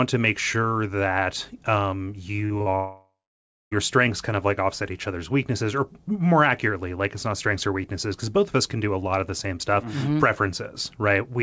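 From 2.32 to 2.68 s there is repeated packet loss with a robotic sound. A run of short holes hits the audio in quick succession. The longest is about 39 ms. Each hole is patched by stretching the sound just before it. About 38% of this span is patched rather than real. The result is choppy and robotic, with small pieces missing.

At 2.76 s the audio cuts out and stays gone until 3.73 s. This is likely a long network dropout. Nearly a second of the audio never arrives. At first the last sound is carried on as a fading buzz or hiss. Then about 0.6 s of plain silence remains. When the audio returns, the lost stretch is simply skipped. The band stops at 8 kHz throughout, which fits the G.722 call codec.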